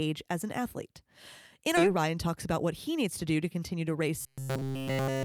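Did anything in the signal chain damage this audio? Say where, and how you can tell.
Yes. A skip ahead at the network jitter buffer hits at 1.77 to 1.79 s: about 0.4 s of speech vanishes, leaving a hard waveform splice with no gap.

Jitter buffer speed-up follows from 1.86 to 4.02 s. Speech runs about 8% fast at unchanged pitch, and the spectrogram shows compressed syllable spacing while harmonic spacing holds.

Robotic sound from repeated short buffers fills 4.21 to 5.25 s, likely from a starved playback buffer looping short blocks. A 134 Hz buzz shows as rigid horizontal spectrogram stripes.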